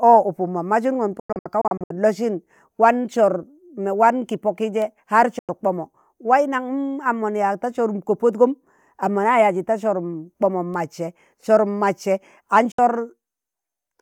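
At 1.20 s the speech breaks into short silent holes until 1.91 s. About 350 ms is lost, with no gap longer than 96 ms. Further digital broadcast dropouts mute 5.39–5.49 s and 12.72–12.79 s. Lost signal or corrupted frames made the receiver mute quickly.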